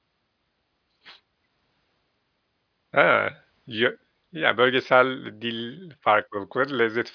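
No technical faults can be heard anywhere in this recording of speech. Nothing in the audio stands out as having gone wrong at any point.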